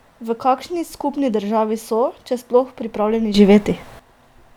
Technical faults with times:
3.34-3.99 sudden gain jump

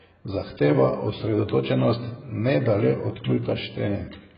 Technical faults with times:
0.00-4.37 AAC compression

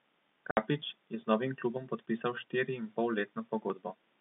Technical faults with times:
0.51-0.57 packet loss filled with silence
0.82 dropped buffer (overrun)
2.37 dropped buffer (overrun)
3.70 dropped buffer (overrun)

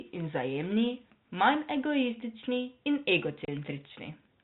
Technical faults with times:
3.45-3.48 packet loss filled with silence

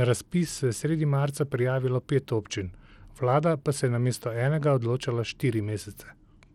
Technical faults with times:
0.00-6.54 Bluetooth SBC compression

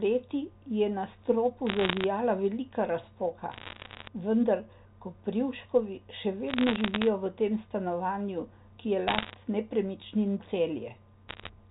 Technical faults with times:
1.67-2.04 bit errors on a digital phone line
3.52-4.08 bit errors on a digital phone line
6.48-7.07 bit errors on a digital phone line
9.08-9.34 bit errors on a digital phone line
11.28-11.50 bit errors on a digital phone line

